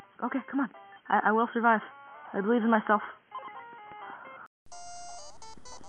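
The input likely switched to a poorer device for the first 4.66 s, passing nothing above 3.2 kHz, so the sound is dull and boxy, about 5 dB different in level, with faint new background noise. It then drops out for 0.2 s before the fuller sound returns.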